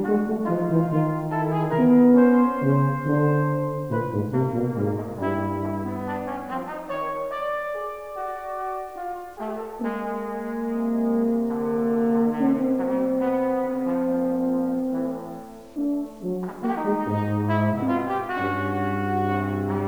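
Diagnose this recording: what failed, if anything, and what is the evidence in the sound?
The failure sits at sample-format conversion, heard across the whole recording as low bit depth without dither. Quiet passages carry a grainy, rasping distortion whose texture shifts with the sound rather than sitting underneath it as steady hiss, and the faintest tails break up or fall to silence. The error floor is roughly 35 dB below the signal, which fits an 8-bit word. The likely cause is truncation with no dither, leaving the rounding error locked to the signal.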